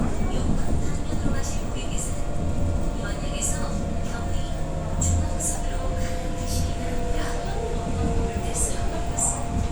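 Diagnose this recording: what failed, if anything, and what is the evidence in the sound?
The codec stage failed, with a corrupt frame decoded twice. A brief error at 1.59 s peaks near -30 dBFS. A louder error from 5.55 to 5.58 s reaches about -20 dBFS. Each spans a few frames. Flipped bits misread gains and codes, placing energy at wrong frequencies.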